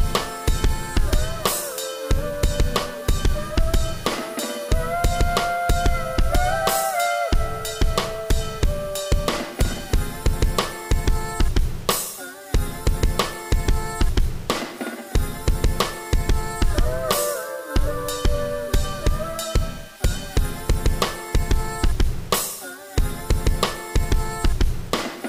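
There are no technical faults to describe at any point in this audio.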